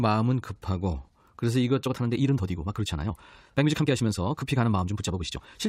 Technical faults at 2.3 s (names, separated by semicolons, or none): time-stretched section